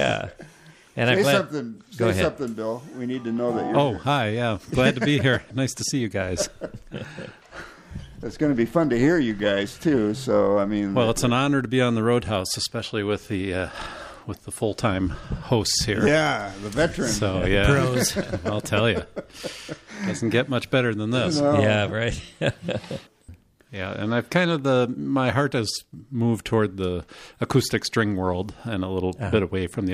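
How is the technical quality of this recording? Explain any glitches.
No glitches or technical faults are audible here.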